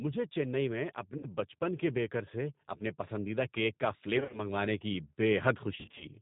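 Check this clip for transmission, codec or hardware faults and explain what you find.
Two problems here, both in the transmission path. The whole clip has gone through the G.729 codec: speech squeezed to 8 kbit/s and rebuilt from a pitch-and-filter model, so it sounds plainly rough and synthetic with nothing above 4 kHz.

There's also VoIP packet loss concealed by the speech codec, at 1.18–1.27 s, 4.17–4.41 s and 5.75–6.06 s. The decoder stretches its last pitch and filter into a buzzy tone or coloured noise that fades. The later two dropouts are scattered rather than solid, with lost runs of up to 30 ms each.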